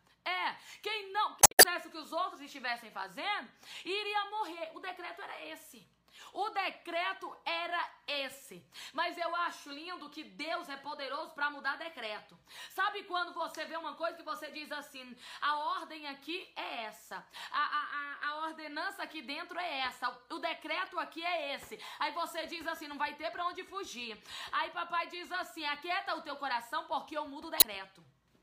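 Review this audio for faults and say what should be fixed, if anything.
Damaged data in the compressed stream: corrupted bytes make the decoder misread or reject frames, lose sync, and hunt for the next valid frame header. That leaves a brief chirp or blip in the sound, at 1.40 to 1.65 s (the longest, about a quarter second), at 20.86 s (a very short glitch), and at 27.57 to 27.64 s. To prevent it, transfer and store the file with checksums or error-checked delivery and re-fetch any damaged segments rather than decoding them.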